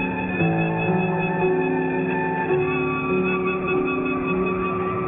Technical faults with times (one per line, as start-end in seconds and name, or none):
0.00-5.07 aliasing